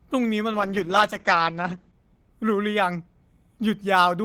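From 0.52 to 2.01 s, a call bitrate drop from 32 to 10 kbps muffles the speech; the spectrogram goes empty above 8 kHz.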